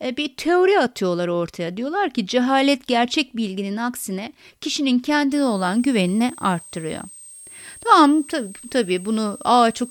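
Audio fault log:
5.32 to 9.90 s, switching supply whistle: a thin, high whistle, wandering between about 8.2 and 8.5 kHz and sitting roughly 20 dB under the speech until the end. A switching power supply is cycling at an audible rate, its frequency shifting as the load changes.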